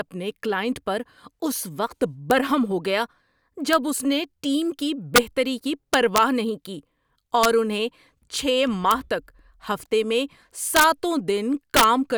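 A gain or summing stage in the signal path lets its result run past the largest integer it can hold. Instead of being limited there, the value wraps to the opposite sign, so the speech's peaks flip across the full range as integer overflow. This is heard as violent cracks, much sharper than clipping, at 2.31 s, at 3.73 s just before "اس نے ٹیم کی", from 5.16 to 5.18 s (peaks pushed about 4 dB over), and from 5.94 to 6.18 s just before "نہیں کی". Further cracks come at 7.44 s (about 2 dB over), at 8.91 s, from 10.76 to 10.84 s right after "تک ہفتے میں" (about 3 dB over), and from 11.77 to 11.84 s, the hardest at about 7 dB over.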